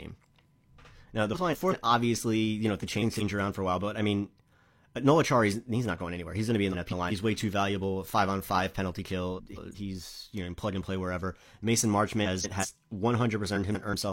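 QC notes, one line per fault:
1.34–1.73, 2.80–3.22, 6.72–7.12, 9.37–9.76, 12.25–12.65 and 13.55–13.94 s: frames out of order. In each stretch of about 0.4 s, two neighbouring 186 ms halves play swapped, which fits two four-frame runs decoded in reverse. The result is a garbled flutter. No time is lost.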